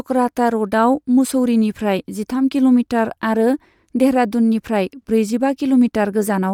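Throughout the speech a grainy, breathy edge rides on the upper frequencies, plainly audible as codec damage, most likely from Bluetooth LC3 compression at a rate that fits roughly 48 kbps. The coder discards fine high-band detail and fills the gaps with shaped noise, block by block in a way consistent with 10 ms frames. A spectrogram would show speckled, patchy texture in the upper bands and nothing above 20.2 kHz. The waveform looks essentially unchanged.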